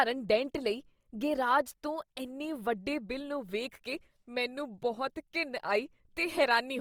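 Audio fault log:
Throughout: Opus compression. The speech sounds rough and grainy, with a noisy sheen on voiced sounds. Band energy is kept, but starved detail is likely filled with folded or noise content. Bandwidth stays full, to 20.3 kHz, fitting roughly 24 kbps CELT-mode coding.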